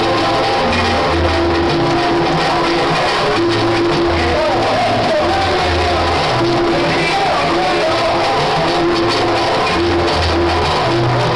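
No technical faults can be heard anywhere here.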